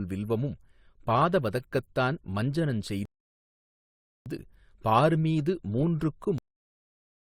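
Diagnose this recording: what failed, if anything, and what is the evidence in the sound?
Rebuffering stall, 3.05 to 4.26 s, at the network and playback stage. Just after "வில்வமும் பாத வதகத்தான் மஞ்சனஞ்" the speech drops to silence for about 1.2 s, then picks up at exactly the point where it stopped, with nothing skipped. That is the signature of a player draining its downloaded buffer and halting until more data arrives. No audio is lost; the gap simply adds 1.21 s to the running time.

Cut-off end at 6.38 s, in the final write or playback stage. After "மீது மூன்றுக்கு" the speech stops mid-sound and falls straight to digital silence, with no natural decay, and stays silent for the remaining 0.93 s. The last buffers of audio were never written out or played, so the recording simply ends wherever the data ran out rather than where the speech finished.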